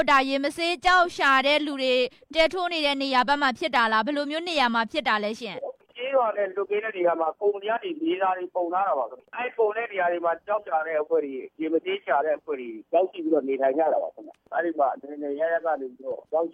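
No technical faults can be heard anywhere in the audio, and the signal stays steady and intact throughout.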